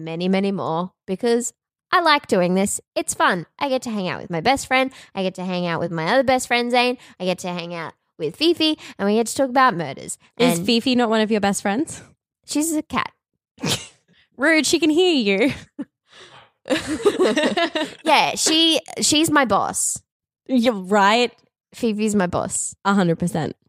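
Nothing stood out on listening to this speech recording.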